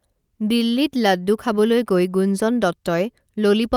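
No audible technical faults.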